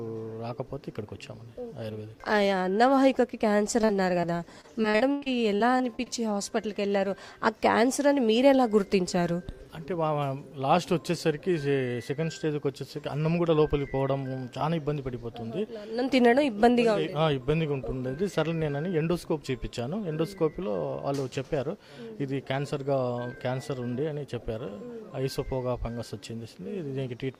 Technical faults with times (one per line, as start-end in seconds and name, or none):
3.81-3.91 short concealed packet loss
4.21-4.25 short concealed packet loss
4.61-6.08 repeated packet loss (robotic sound)